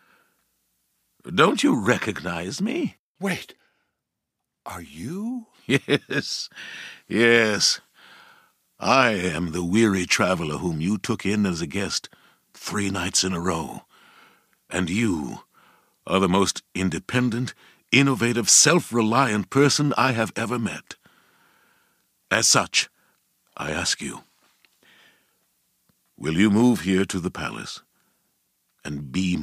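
No technical faults can be heard anywhere in the recording; the speech signal stays intact and continuous throughout.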